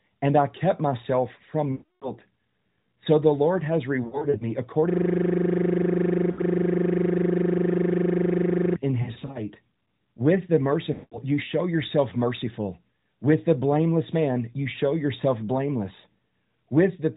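Speech over a narrowband AMR mobile link, with nothing above 4 kHz. Lost AMR speech frames hit it five times. From 1.72 to 2.14 s there is a solid gap of about 300 ms. The decoder stretches the last good sound and lets it fade to silence. From 4.04 to 4.49 s, 140 ms of loss is scattered over 360 ms, heard as short dips and warbles. At 6.32 to 6.41 s, 60 ms drops out. From 9.02 to 9.39 s, 160 ms is scattered, with one 60 ms run. From 10.94 to 11.21 s, 180 ms is lost in a block. After each gap the speech returns weak or rough. A system hang loop runs from 4.90 to 8.76 s. The computer froze while the sound hardware kept replaying its buffer. One 40 ms slice repeats 97 times, giving a steady 25 Hz buzz. That loop length fits a 40 ms ring buffer.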